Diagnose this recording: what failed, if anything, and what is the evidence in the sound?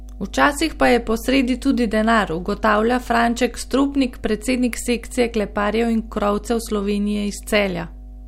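The analogue wiring failed: a ground loop or nearby transformer is leaking the power line into the signal, giving mains hum. A steady 50 Hz tone with low harmonics runs under the speech for the whole clip, sitting only about 15 dB below it.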